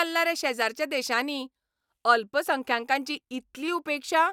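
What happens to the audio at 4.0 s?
Nothing goes wrong at 4.0 s; the speech carries on intact through that moment.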